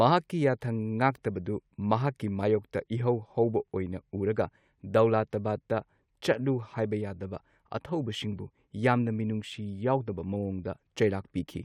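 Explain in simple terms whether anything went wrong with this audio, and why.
Nothing went wrong; the speech sounds as intended.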